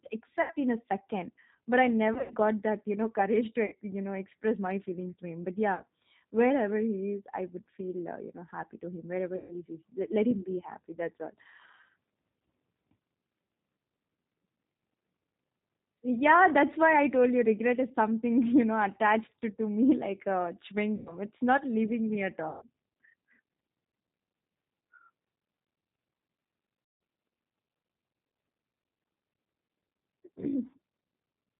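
The speech here has passed through the G.729 codec, specifically the G.729A variant at 8 kbit/s. It rebuilds each 10 ms frame from a vocal tract filter, a pitch predictor and a few pulses, and cuts everything above 4 kHz, so the damage is plainly audible: a muffled, band-limited sound with a rough, synthetic edge. On top of that there is VoIP packet loss concealed by the speech codec at 0.42, 2.14, 3.66, 5.75, 9.36, 20.96, 22.49 and 26.83 s. The gaps range from 40 ms to 180 ms, the longest at 26.83 s and the second longest, 140 ms, at 9.36 s. At 2.14 s the 120 ms of loss is scattered over about 160 ms with a longest run of 80 ms. At each gap the decoder keeps extending its last pitch and filter while lowering the gain, so the sound smears into a buzzy tone or coloured noise that fades. Because each frame builds on the previous one, the sound stays weak or distorted for a short while after the stream resumes.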